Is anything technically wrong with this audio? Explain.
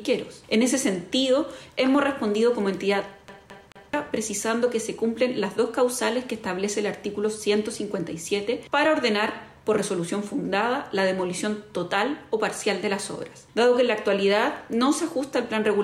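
Yes. From about 3.28 s to 3.94 s the audio gets caught in a CD stuck on one turn. A scratch is knocking the laser back a track at the same point each rotation, so a slice of about 217 ms plays three times in a row, with a tiny mute at every jump back. What you hear is that quick, evenly spaced stutter you'd know from any skipping CD, lasting roughly two-thirds of a second before it carries on.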